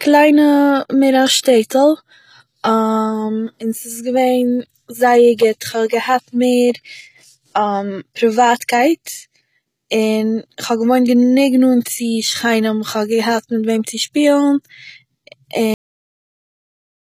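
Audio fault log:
throughout HE-AAC compression. Treble sounds gritty and lispy on s sounds, with nothing above 14.9 kHz. Likely HE-AAC v2 near 20 kbps, copying lower bands upward.
15.74 s cut-off end. Sound stops mid-sound and falls straight to digital silence, with no decay. The final buffers were never written or played.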